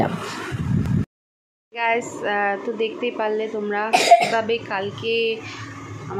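No technical faults can be heard anywhere in this audio.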